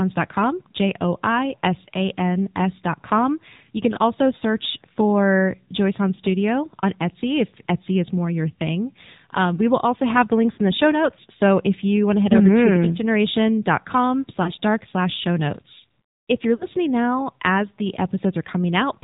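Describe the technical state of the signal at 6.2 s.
A lost AMR speech frame falls between 6.16 and 6.20 s. One frame's data failed its radio checksum, so the decoder filled the gap by repeating the previous frame's pitch and vocal-tract settings at reduced gain. The result is a brief dip or warble, matching a single missing 20 ms frame. The voice returns a touch rough for an instant before settling.

Underneath, the AMR narrowband mobile codec shapes the whole passage. Everything is confined below 4 kHz, and the vocal-tract model, driven by sparse pulses, gives the voice a plainly audible buzzy, synthetic edge. That level of damage suggests a low bitrate mode around 7.4 kbps. It also leaves any background texture swirling.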